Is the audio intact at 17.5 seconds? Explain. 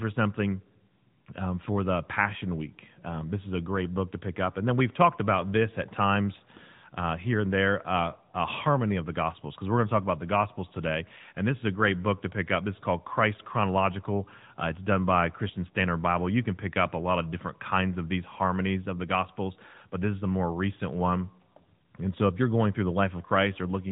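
No. At 17.5 s the speech carries AMR narrowband mobile codec damage, present throughout. Nothing above 3.8 kHz survives. A pulse-driven vocal-tract model leaves it audibly buzzy, consistent with about 10 kbps.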